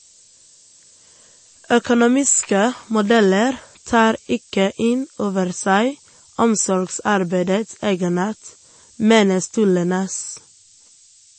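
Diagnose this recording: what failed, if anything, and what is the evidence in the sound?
Throughout the speech there is a steady, thin hiss only about 15 dB below the signal, climbing steeply toward the top of the band. This points to sample-format conversion: low bit depth with noise shaping, fitting roughly 7-bit requantization with the rounding error pushed upward. Unlike codec damage, this hiss is constant and never swirls.

Nothing is present above 8.3 kHz across the whole clip, and what remains sounds plainly watery and swirly, with smeared consonant attacks. The likely cause is MP3 compression at the codec stage, at a rate around 32 kbps: a fixed treble cut-off plus weak spectral lines flickering between frames. Bit-depth noise adds hiss but never removes treble.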